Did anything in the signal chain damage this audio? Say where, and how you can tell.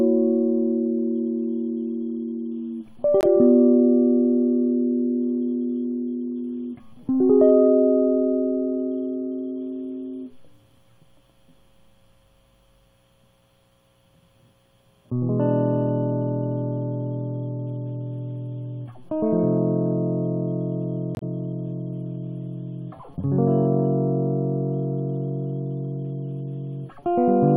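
Yes, at the codec stage: corrupt frames were muted. Compressed frames failed to decode and the player substituted silence, so the music cuts abruptly to nothing from 3.21 to 3.25 s, a gap that fits one frame, and from 21.15 to 21.23 s, which fits three, with the music continuing on time afterwards.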